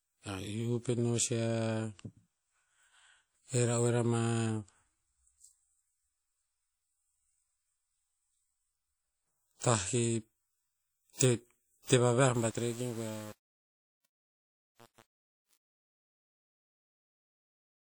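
WMA compression runs throughout, with plainly audible transform-codec smearing: quantisation noise spreads around each sound, likely from a WMA encode at about 48 kbps.

Truncation distortion on a fade starts at 12.34 s, right after "te vaviah", and lasts to 17.98 s. The undithered fade keeps too few bits, which fits about 7 bits, so the waveform steps coarsely and sounds gritty.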